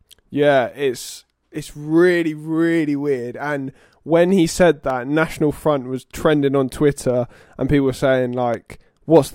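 Speech, with two single sharp clicks at 4.90 s and 8.54 s, likely dropped samples: a fraction of a millisecond goes missing, so the waveform jumps, unlike a dropout, which audibly silences sound.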